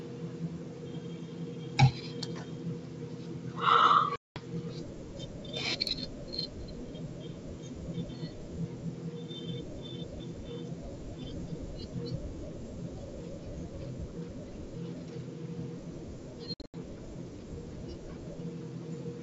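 At 4.16 s the speech drops into a hard-edged silence of about 200 ms, and at 16.54 s it breaks up into short gaps over 200 ms. Each time it comes back with brief distortion. This is packet loss on an ADPCM call: the silences replace lost packets, and the decoder's predictor and step size drift from the sender's until they resynchronise.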